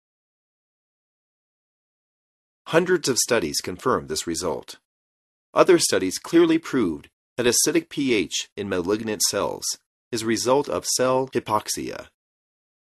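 No faults found; the level rises smoothly from around 2.0 s to full by 2.22 s, with no click or hard edge at the onset.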